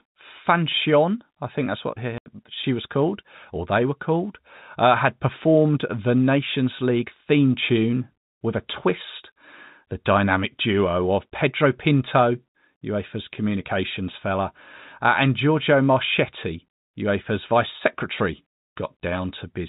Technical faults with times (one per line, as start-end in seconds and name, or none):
2.18-2.26 packet loss filled with silence